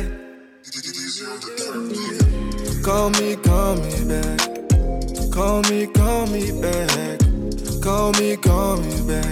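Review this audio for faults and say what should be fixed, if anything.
A single sharp tick lands at 7.31 s, lasting one sample and peaking at about -31 dBFS, with broadband energy that has nothing to do with the surrounding sound. This is a bit error spike: one bit in a stored or transmitted sample flipped, so that sample's value jumped by a power of two and then returned immediately on the next sample. Repair it by interpolating across that one sample. To prevent a recurrence, use error-checked digital links and reliable memory or storage for the transfer and capture path.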